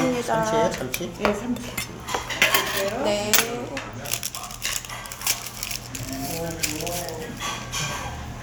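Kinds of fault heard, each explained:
No technical fault can be heard anywhere in this recording. Nothing in the sound needs to be listed or explained here.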